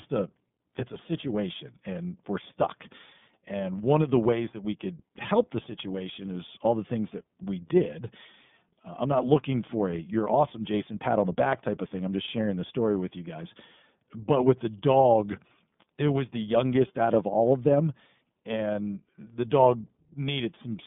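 iLBC codec damage runs throughout the speech: each 30 ms frame is coded independently, nothing passes above 3.7 kHz, and the rough, synthetic texture fits 13.33 kbps.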